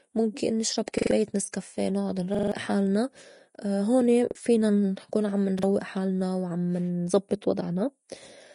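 Throughout the speech there is a grainy, hissy treble with roughened tone and smeared consonant attacks, and nothing above about 10.6 kHz. This is likely Vorbis compression at a low bitrate near 35 kbps. Unlike a simple low-pass filter, which would only dull the sound, the upper band here carries a noisy texture where the coarsely quantised detail was replaced by noise of similar energy.

Repeated buffer faults appear four times. A 42.67 ms slice, which fits a 2048-sample buffer, plays again with a hard join at each restart. From 0.98 to 1.11 s it sounds three extra times, and from 2.35 to 2.52 s, right after "نسكافيه نُعُّد", four extra times. Both are audible stutters that swallow about 150 ms of speech. Single repeats at 4.31 s, just before "فينا نكون عم", and at 5.59 s, between "فينا نكون عم" and "حالنا وعم نزبّط", each lose about 40 ms. What separates these from a dropout is that identical audio returns rather than silence, and the repeats are too short to be a skip back in the recording.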